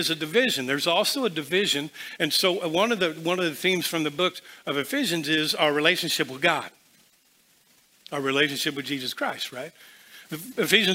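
No technical fault can be heard anywhere in the audio. Nothing in the sound points to a problem with how it was captured, processed or played back.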